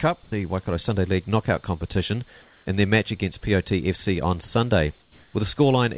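From 0.24 to 0.32 s the real background is replaced by comfort noise in place of the background. The sender likely stopped transmitting during a pause, and the receiver filled the gap with a steady, featureless hiss at the same level. On a spectrogram, the textured noise floor turns smooth and uniform.

From 0.30 to 0.32 s the returning sound shows an onset clipped by the voice detector, likely because detection lagged by about 20 ms. The sound starts abruptly, without its soft attack, and the waveform jumps straight from flat noise into the sound.

The same comfort-noise substitution returns from 2.42 to 2.66 s, about 3 dB quieter than the real background, and from 5.02 to 5.34 s, about 2 dB quieter. Each gap is a dip into smooth hiss and shows as a slightly darker, uniform band.

Throughout the clip, nothing sounds above 4 kHz, consistent with a narrowband telephone codec.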